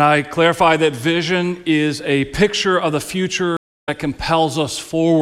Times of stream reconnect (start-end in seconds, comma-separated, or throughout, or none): 3.57-3.89